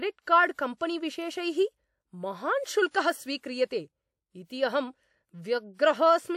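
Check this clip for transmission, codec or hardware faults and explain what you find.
The speech has one codec fault, pre-echo, at four sharp onsets: 0.54 to 0.58 s, 2.91 to 2.94 s, 4.44 to 4.50 s and 5.74 to 5.79 s. A short hiss leads each attack by roughly 40 to 60 ms. The transform coder spreads the attack's quantisation noise back through its block, which softens the onset. Unlike real echo or reverb, the smear comes before the sound rather than trailing it.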